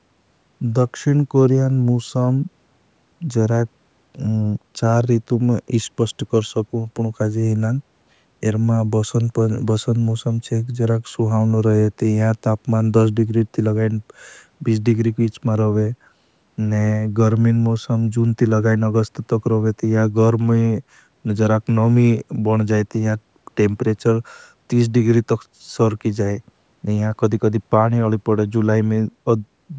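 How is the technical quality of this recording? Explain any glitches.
No glitches turn up in this speech recording; it has simply passed through a call's microphone processing, so the lowest bass is trimmed and nothing reaches above 8 kHz, which is just how that path normally sounds.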